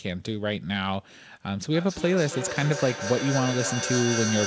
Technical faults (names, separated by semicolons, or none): feedback echo between two devices